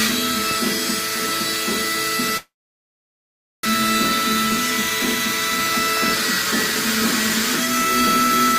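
At 2.37 s a long network dropout is the likely cause of what follows. The sound smears into a fading buzz, then goes almost silent for about 1.15 s before returning at 3.67 s. About a second of audio never plays, and the stream comes back roughly 0.3 s later than before. A brief packet-loss glitch would differ: it lasts only tens of milliseconds, with no long silence and no skipped stretch.

From 4.57 s to 7.69 s a jitter buffer speed-up trims the excess delay. Short pitch-period pieces are cut out repeatedly, removing around a tenth of a second in total, so the audio runs at 104% speed. The pitch stays where it was. That separates it from a sample-rate mismatch, where faster playback would also raise the pitch.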